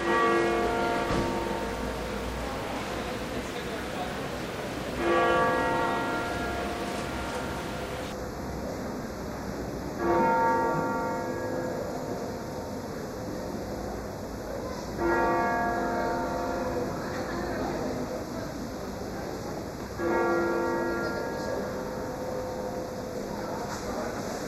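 From 8.12 s to the end, channel delay (comb filtering) sets in: one channel lags by a fraction of a millisecond, and the mono sum cancels near 3 kHz and its odd multiples, leaving a hollow, phasey sound. The notches stay fixed, unlike flanging's sweep.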